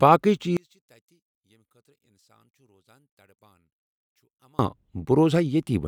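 From 0.57 s to 4.59 s the speech falls by about 38 dB in mono playback. The likely cause is one channel inverted: with one stereo side in reversed polarity, everything the two channels share cancels when they are summed, and the centred speech nearly disappears. A dropout or mute would leave true silence. Here a faint residue of the channel difference remains, and full level returns at 4.59 s.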